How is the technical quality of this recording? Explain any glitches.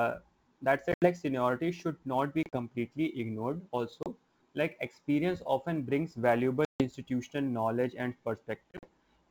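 The recording has two kinds of fault: steady clock jitter and five dropouts from packet loss. Wideband speech comes through clear up to about 7 kHz, as G.722 coding allows.

Sample clock jitter runs through the whole clip. The converter's clock wavers by a few microseconds. Each sample is taken a little early or late. Steep waveform slopes turn that timing error into level error. The result is a faint hiss or grit about 35 dB below the speech. It rises on loud, bright sounds and disappears in pauses.

Packet loss on an ADPCM call causes five gaps. They fall at 0.92 to 1.07 s, 2.43 to 2.57 s, 4.03 to 4.07 s, 6.65 to 6.83 s and 8.71 to 8.88 s. Lost packets are filled with silence. The first, second and last holes are broken into parts, each spread over about 100 to 120 ms. The 6.65 s hole is one solid 150 ms gap. Afterwards the decoder's predictor and step size no longer match the sender's. 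Speech returns slightly distorted, then settles within tens of milliseconds.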